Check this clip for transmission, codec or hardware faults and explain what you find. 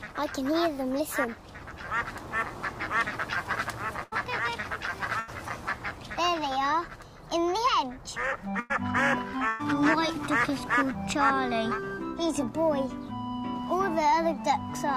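Four bursts of packet loss occur, at 4.03 to 4.13 s, 5.20 to 5.30 s, 8.60 to 8.72 s and 9.48 to 9.61 s. In each, a short run of packets never arrived in time, removing about 80, 80, 100 and 120 ms of audio respectively. The receiver covered each hole by extending the last sound it had and letting it fade, producing a brief held buzz or dying hiss. The sound then jumps ahead, with that stretch simply gone.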